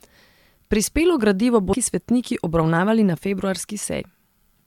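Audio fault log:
1.72 s and 4.00 s: damaged data in a compressed stream. A brief glitch just before "svetniki obravnavali", then another, where corrupted frames made the decoder misread and lose sync.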